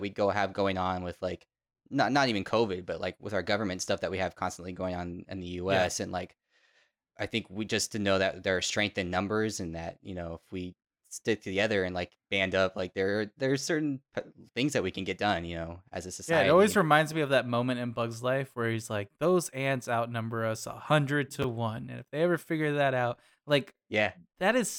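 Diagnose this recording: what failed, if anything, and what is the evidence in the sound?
The driver or buffer stage delivered blocks out of sequence: at 21.42 s, just before "one and if they", one chunk of about 5.33 ms arrived late and was played two chunks after its proper place. No audio is lost, but the reordering creates three hard joins where the waveform jumps. Those joins are heard as a brief garbled, jumbled flicker in the speech, the signature of chunks out of order.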